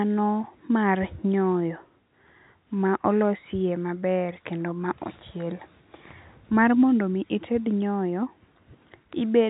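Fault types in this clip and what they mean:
Nothing here counts as a fault: it's speech carried over ordinary telephone coding, so it sounds narrow, topping out at about 3.8 kHz, which is exactly how a phone line is meant to sound.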